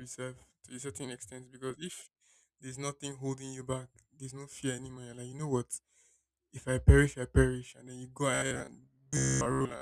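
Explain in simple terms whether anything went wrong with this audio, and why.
From 8.35 s to the end, speech turns into robotic sound from repeated short buffers, a metallic 67 Hz buzz, likely from 15 ms snippets replayed to fill gaps.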